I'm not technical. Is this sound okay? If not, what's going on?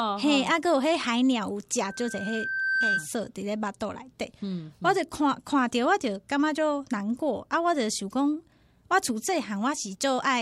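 No. From 1.82 to 3.11 s a thin, piercing whistle at about 1.6 kHz creeps in, swells over roughly a second, and ends up a little louder than the speech itself before cutting off. That is loudspeaker feedback squeal: the microphone was hearing its own loudspeaker, and at that one pitch the sound kept going round the loop, getting louder each time, until the loop was broken.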